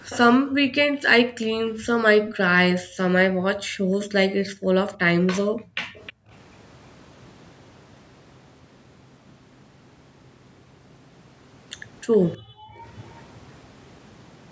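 At 0.1 to 0.18 s a faint copy of the speech arrives about 314 ms behind the original, sitting roughly 15 dB under it. This is likely an echo leak: a loudspeaker on the far end replayed the call, and its echo canceller let part of that pickup slip back into the line. The same delayed scrap returns at 2.27 to 2.34 s, and again at 5.95 to 6.13 s, where it is quieter, around 20 dB down.

From 0.41 to 2.06 s the echo canceller, reacting to loudspeaker playback, clamps the microphone down by as much as about 40 dB. This is background gated by the echo canceller. The room tone falls away for roughly a second and a half, then comes back once the suppression releases. It happens again at 2.83 to 4.67 s for about a second, at 5.45 to 6.3 s overlapping the last echo scrap, and briefly at 12.38 to 12.83 s. Each time the ambience hollows out and then reappears.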